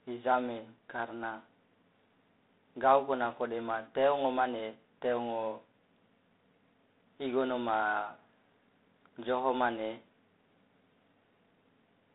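From start to finish the speech runs through G.726 ADPCM coding, and it's plainly audible. Rather than storing each sample, the coder sends only a few bits describing how far the signal strays from its own running prediction, and with so few bits the leftover error turns into a harsh, rasping hiss that rises and falls with the speech. The roughness fits the 24 kbit/s mode. The line band sits around 250 Hz to 3.7 kHz, with nothing above 3.8 kHz.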